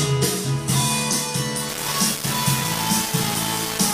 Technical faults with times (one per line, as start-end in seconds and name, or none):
1.69-3.94 low bit depth without dither